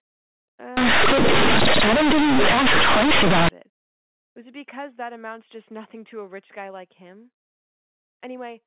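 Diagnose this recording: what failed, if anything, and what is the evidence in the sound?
The sample-format conversion stage failed: from 0.77 to 3.49 s the speech turns into harsh, over-loud buzz with heavy noise in the gaps. That's companded audio read as linear. The mu-law bytes were taken as plain 8-bit samples without expansion, so every sign flip swings across half the range and quiet bits blow up, while the surrounding 8 kHz-sampled telephone speech sounds right.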